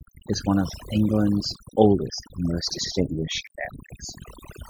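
Throughout, overdone noise removal pulls quiet frequency bands down along with the noise, leaving near-silent gaps with twinkling specks. A swirly, treble-limited coloration is also present throughout, likely from MP3 compression at a low bitrate around 64 kbps, where weak spectral lines switch on and off between frames.

At 0.34 s, just before "one of", a single sharp click likely marks dropped samples. The waveform jumps forward by a fraction of a millisecond, too briefly to lose any sound. The same click recurs at 1.55 s, just before "oldest and most", and again at 3.47 s.

From 2.79 to 2.91 s, right after "oldest and most", frames out of order swap two adjacent blocks of about 52.2 ms each, fitting two-frame runs. This produces a garbled flutter.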